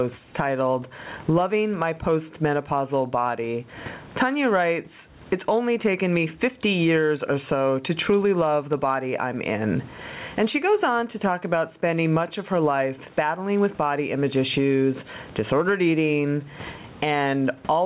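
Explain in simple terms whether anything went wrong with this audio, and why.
Gain pumping is present throughout the speech. The level moves in a large swing that squashes everything together. The likely cause is microphone gain set far too high, with a fast limiter repeatedly pulling it down.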